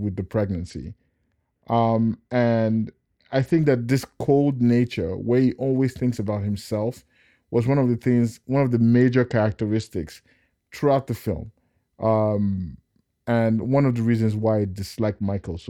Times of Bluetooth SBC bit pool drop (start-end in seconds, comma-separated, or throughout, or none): 0.58-3.58, 8.93-9.89, 14.99-15.69